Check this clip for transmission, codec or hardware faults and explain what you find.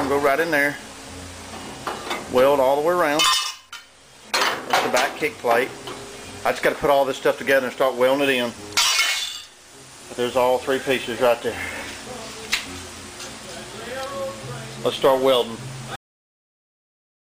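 One fault: a cut-off end. At 15.96 s the sound stops abruptly mid-event and falls straight to digital silence, with no decay, for the remaining 1.25 s. The final buffers were never written or played out, so the recording ends without its natural tail.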